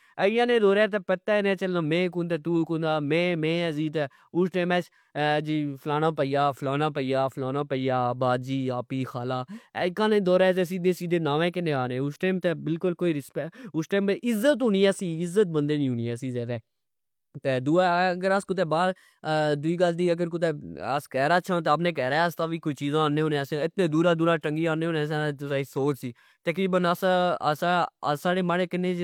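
Listening through the speech recording, nothing stood out as a technical fault at any point.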